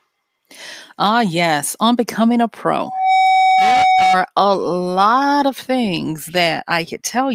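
From 2.80 s to 4.20 s, right after "yes on becoming a" and ending just before "a lot of things", the speech is overtaken by loudspeaker feedback squeal. A single tone at 752 Hz rises over roughly a third of a second and then sits a few decibels above the speech. The microphone was picking up the loudspeaker it fed, and at that frequency the loop gain went above one, so the tone kept reinforcing itself.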